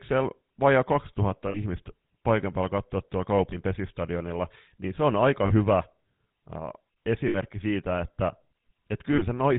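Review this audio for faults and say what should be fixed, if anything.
The whole clip carries GSM full-rate codec damage, and it's plainly audible: the speech has that buzzy, gravelly roughness from modelling the voice as a filter fed by a sparse pulse train, and nothing comes through above 4 kHz, which fits 13 kbps full-rate GSM. Fix it by recording or routing through a wideband path instead.

There are also lost GSM frames, where the decoder repeats the last good frame's settings and the sound hangs as a rough, metallic ring. These fall at 1.48–1.59 s (60 ms), 3.50–3.55 s (20 ms, after "paikan päällä katsoa tuolla"), 5.46–5.52 s (40 ms, after "niin se on aika"), 7.28–7.35 s (60 ms, before "siitä että"), and 9.14–9.23 s (40 ms). A cleaner network link or error protection on the transmission would prevent them.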